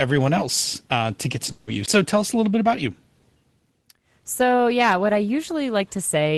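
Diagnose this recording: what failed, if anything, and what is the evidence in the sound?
A long network dropout hits at 1.51 to 1.70 s, just after "uh to get to". The last sound smears into a fading buzz for about 0.16 s. Speech then resumes with that stretch gone. Lost packets on the network are the likely cause.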